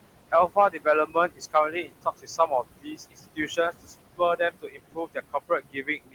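Noise suppressor artifacts run through the whole clip. The suppressor treats the room noise, which sits about 12 dB below the speech, as steady noise and pulls those bands down by about 21 dB frame by frame. The background sinks in the pauses and swells back under each phrase.

Speech cut by the noise suppressor happens six times: 0.32–0.86 s, 1.06–1.55 s, 1.71–2.64 s, 2.81–3.19 s, 3.35–3.94 s, and from 4.38 s to the end. In each span the suppressor mistakes quieter parts of the speech for noise and turns them down with it. The drops reach about 16 to 22 dB, and within each of the first five spans a short stretch, roughly 150 to 300 ms in total, sounds swallowed or faint.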